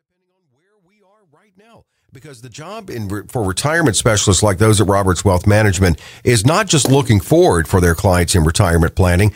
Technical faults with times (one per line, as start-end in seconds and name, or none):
none